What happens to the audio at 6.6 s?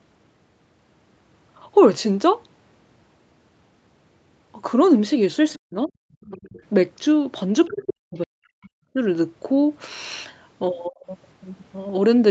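Just before 6.6 s the speech is caught by speech suppressed in double talk, from 6.31 to 6.59 s. The likely cause is both ends talking at once, so the echo canceller couldn't tell the local talker from its own loudspeaker echo and pulled the whole signal down, by around 25 dB at its deepest, over roughly a fifth of a second. The speech dips and breaks up. On a waveform the envelope caves in abruptly, and on a spectrogram the harmonics and upper energy fade or vanish in patches.

Overlapping that, from 6.43 to 6.62 s, comes the other side's voice leaking through. The far-end voice from the loudspeaker likely wasn't fully cancelled at the microphone, so a faint second voice, about 30 dB below the main speech, slips in. On a spectrogram it appears as weak harmonic traces sitting under the suppressed region and trailing just past it, too low to show clearly on the waveform.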